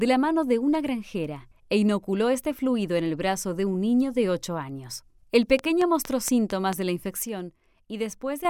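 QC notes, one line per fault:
5.59 to 6.74 s, train of clicks: a run of about seven sharp, near-identical pulses at a steady 4.4 per second, heard as regular ticking laid over the sound, standing out around 10 dB above it at their peaks. The even spacing and matching shape point to something outside the audio injecting a pulse on a fixed cycle, likely electrical interference from nearby equipment or a faulty connection or power supply.
7.25 to 8.45 s, sudden gain jump: the level drops by about 6 dB in a single step, and the background noise falls with the sound, so the whole signal is scaled at once rather than the source getting quieter. An instant change like this, with no fade, is the signature of a gain setting or bit shift applied between one sample and the next, likely a digital level change without a ramp. The level stays down until the change reverses at 8.45 s.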